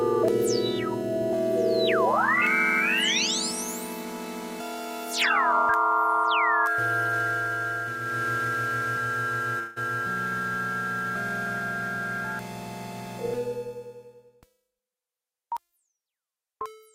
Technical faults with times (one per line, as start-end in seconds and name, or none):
9.59-9.78 long network dropout